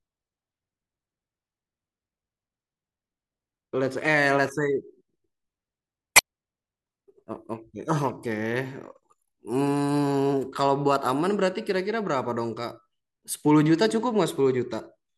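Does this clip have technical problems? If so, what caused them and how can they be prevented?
Yes, there's damaged data in a compressed stream from 6.13 to 6.19 s. Corrupted bytes throw the decoder off sync briefly, giving a short glitch. Checksummed transfers and verified copies prevent it.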